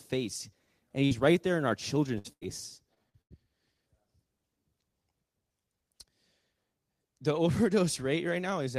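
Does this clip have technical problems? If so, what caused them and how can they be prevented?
Yes, there are two. First, a burst of packet loss at 1.05 to 1.12 s, just before "right there in our". A short run of audio never arrived in time, so the receiver stretched the last bit of sound for about 50 ms while fading it down, then jumped ahead, and roughly 60 ms of the speech is simply gone. Giving the receiver a slightly deeper jitter buffer would help it ride out a short hiccup like this.

The second is repeated packet loss (robotic sound) from 2.18 to 3.32 s, right after "right there in our". Here the network dropped or delayed audio seven times in about a second. Each hole got patched by continuing the previous sound, the longest gap being 90 ms, so about 28% of that stretch is filled-in guesswork and roughly 340 ms of real speech is missing, which gives it that choppy quality. To prevent it, fix the unstable link itself, for example with a wired connection, less competing traffic, or forward error correction in the codec.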